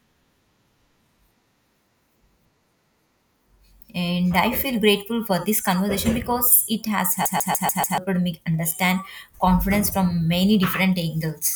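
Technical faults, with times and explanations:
7.25 to 7.98 s, CD stuck on one turn: the speech stutters rapidly and evenly, one 145 ms fragment playing five times with a brief mute at each jump. A scratch is throwing the laser back one track at the same point on every disc revolution.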